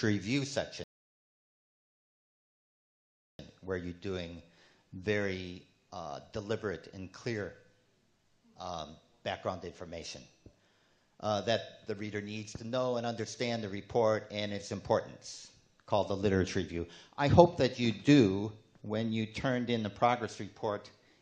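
At 0.84 s the player drained its buffer of downloaded audio and had to halt until more data arrived, a rebuffering stall lasting until 3.39 s. The sound drops abruptly into silence for about 2.55 s, then picks up again at exactly the point where it broke off. Nothing is skipped or repeated; the gap simply inserts dead time, so the clip runs that much longer than its content.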